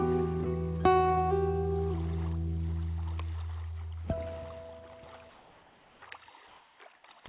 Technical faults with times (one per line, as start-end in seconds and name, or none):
5.30-6.02 comfort noise in place of the background
6.48-7.04 comfort noise in place of the background